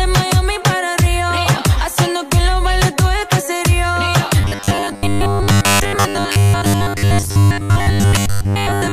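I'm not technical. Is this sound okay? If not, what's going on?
No. From 4.41 s to the end at 8.93 s, there's robotic sound from repeated short buffers. New audio likely arrives too slowly, so tiny 10 ms pieces are replayed over most of it. This creates a fixed, metallic 100 Hz buzz.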